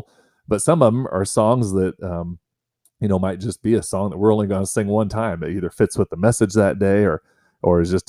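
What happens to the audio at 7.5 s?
Nothing goes wrong at 7.5 s; the speech carries on intact through that moment.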